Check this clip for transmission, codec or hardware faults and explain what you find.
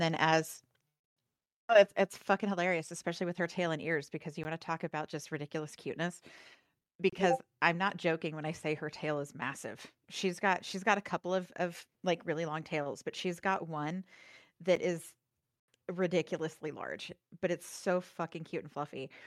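Three short dropouts interrupt the speech, all of the same kind: a block of digital silence.

At 4.44 s, between "and ears because you" and "want to talk about", a gap of about 15 ms sounds like a sharp tick. From 7.10 to 7.13 s, a 30 ms gap is long enough to hear as a brief hole. At 14.76 s, a 10 ms gap comes across as a single click. In each case a run of samples was replaced by zeros, most likely because the output buffer wasn't filled in time. The sound stops dead and restarts with no fade, so each boundary is an abrupt step.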